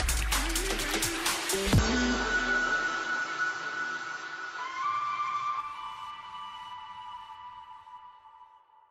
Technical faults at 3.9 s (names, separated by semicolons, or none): input switched to a poorer device